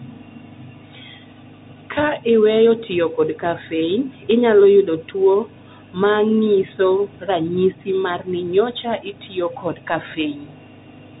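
For the full clip, the speech has passed through a Bluetooth CVSD headset codec, which codes each sample as a single up-or-down step whose size keeps adapting, at a rate that fits the 64 kbps narrowband headset link. Everything above 3.8 kHz is gone, so the speech sounds thin and boxed in. The codec damage is plainly audible: sibilants come out scratchy, sudden loud high sounds smear where the step can't keep up, and a grainy hiss sits under the speech.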